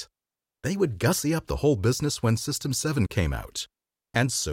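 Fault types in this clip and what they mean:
No faults detected in this speech recording.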